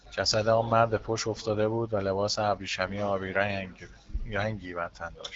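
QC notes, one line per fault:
Nothing to flag on this speech clip; it comes across as ordinary HD Voice audio with its top end stopping short of about 7.6 kHz.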